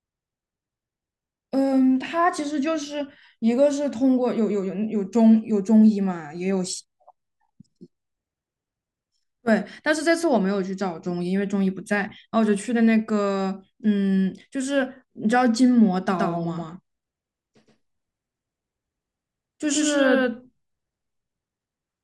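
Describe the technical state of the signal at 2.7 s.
At 2.7 s the signal is intact, with no audible fault at that point in the speech.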